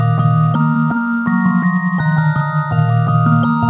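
Nothing goes wrong anywhere in the clip, and the only thing to notice is the usual telephone-band character of a call path, with nothing above about 4 kHz, which fits G.711 mu-law at 64 kbps.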